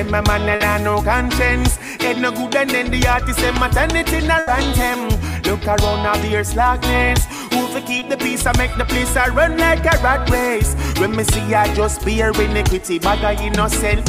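Two bursts of packet loss break up the audio, at 0.55 to 0.62 s and 4.39 to 4.49 s. In each, the receiver extends the last sound for about 50 ms and then 80 ms while fading it. On a spectrogram this shows as smeared, dimming harmonics or noise, followed by a hard jump where about 40 ms and then 80 ms of audio are skipped. A short concealed packet loss at 7.99 to 8.03 s fills a 20 ms hole with synthesised continuation. It appears as a brief blur in the waveform that blends back into the real signal.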